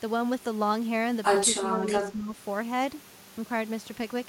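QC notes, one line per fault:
1.59–2.37 s, speech suppressed in double talk: speech dips by up to about 10 dB, breaking up in patches totalling around half a second, likely because an echo canceller, hearing both ends talk together, mistook this talker for loudspeaker echo and attenuated it.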